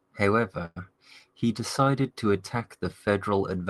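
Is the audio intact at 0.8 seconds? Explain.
Yes. A call audio freeze ends just before, at 0.65 to 0.77 s: packets were likely held up and the jitter buffer ran dry, so about 108 ms of fading continuation and silence were inserted. At 0.8 s "he decided to attack" resumes complete, only delayed.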